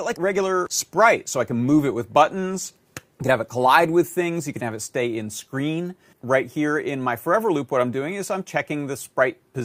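Nothing in the speech recording stands out as a technical fault, so there's nothing here to flag.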